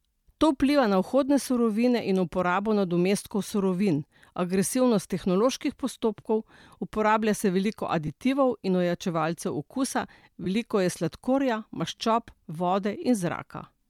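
Brief, grainy smears break into the speech at 8.07 s, from 10.44 to 10.46 s, and at 12.28 s. Each sounds like a short burst of hissy, textured noise standing in for the sound. These are lost LE Audio frames: gaps of about 10 ms, 20 ms and 10 ms, fitting one, two and one missing Bluetooth frames. The LC3 decoder covered each gap by repeating the last spectrum with randomised phase signs, which turns the sound into that noisy smear.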